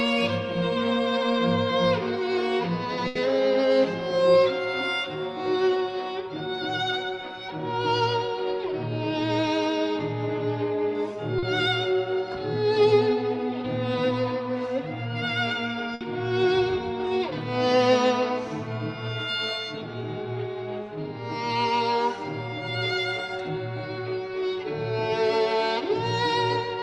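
A burst of packet loss at 3.07 to 3.21 s and 15.95 to 16.03 s fills 80 ms and 60 ms by continuing and fading the last sound. At 11.39 s, a short concealed packet loss patches 40 ms, heard as a brief smear into the resuming audio.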